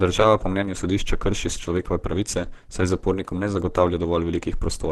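Throughout, the speech sounds hoarse and grainy with nothing above 12.1 kHz, likely Opus compression at roughly 16 kbps; bands are noise-filled rather than MP3-style swirling.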